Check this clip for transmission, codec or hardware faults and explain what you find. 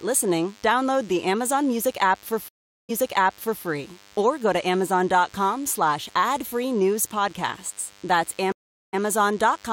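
Two faults are present: a constant buzz throughout the speech and two stream dropouts.

DECT cordless phone buzz, throughout: a nearby DECT handset or base transmits a radio burst every 10 ms, and the audio circuitry rectifies it. The result is a thin, steady 100 Hz buzz rich in harmonics, sitting around 30 dB below the speech.

Stream reconnect, at 2.48 to 3.64 s and 8.52 to 8.99 s: the connection dropped, so the player fell silent for about 0.41 s, reconnected and restarted its decoder mid-stream. After "app for", playback resumes 0.75 s earlier, so that stretch repeats before "or go to". The second resumes 0.06 s earlier.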